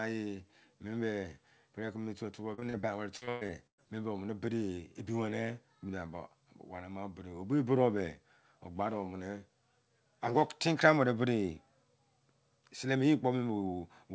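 Speech, with a burst of repeated packet loss (robotic sound) from 2.54 to 3.84 s: around ten short dropouts, the longest 116 ms, are patched by extending the preceding sound, so roughly a third of that span is concealment and the voice turns choppy. On a spectrogram the stretch shows smeared, frozen harmonic bands broken by abrupt seams; the waveform shows repeated near-identical cycles. Throughout, nothing appears above 8 kHz, which fits a wideband call codec such as G.722.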